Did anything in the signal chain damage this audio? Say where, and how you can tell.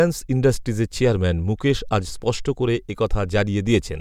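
No, nothing in the signal chain audibly damaged this speech recording, and there is no sign of any stage having degraded the signal.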